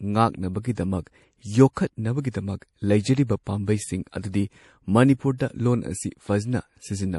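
MP3 compression runs through this speech recording. Nothing is heard above 11.5 kHz, and weak detail flickers watery and swirly, which fits a low bitrate near 48 kbps, likely from an MP3 encoder. Pre-echo occurs at 0.73 to 0.77 s, 1.73 to 1.77 s and 2.21 to 2.25 s, a short hiss of 38 to 45 ms leading each sharp attack, as block-spread quantisation noise fills the quiet before it.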